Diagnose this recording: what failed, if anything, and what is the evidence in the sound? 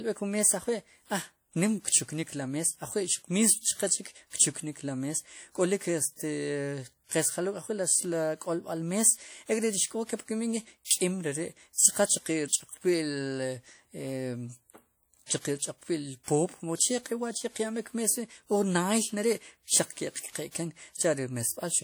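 WMA compression, audible throughout the speech. This is a codec-stage fault, likely from an early Windows Media Audio encoder. Long transform blocks smear quantisation noise into a ringing, washy hiss that pumps with the signal. The plainly audible damage points to roughly 48 kbps.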